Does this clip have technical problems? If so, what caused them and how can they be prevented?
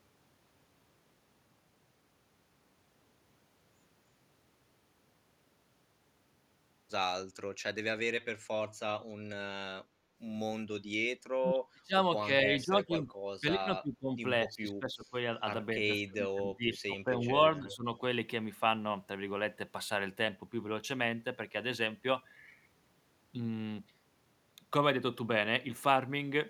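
Yes. From 9.99 to 10.17 s the room sound dips by about 6 dB, then returns. This is background gated by the echo canceller. The far side was playing through the loudspeaker, so the canceller turned the microphone down. A gentler, slower-acting suppressor would keep the background steady.

The speech dips at 11.38 to 13.09 s, 13.4 to 14.12 s, 14.47 to 15.14 s and 15.75 to 17.86 s. The dips reach roughly 35 dB at worst. This is likely speech suppressed in double talk. Both sides spoke at once, and the canceller muted the local talker. Better double-talk detection would prevent it.

From 17.57 to 17.75 s a faint copy of the speech comes back 303 ms late, about 20 dB below the speech. This is an echo leak, likely from a loudspeaker whose echo the canceller did not fully remove. A headset or a better-converged canceller would stop it.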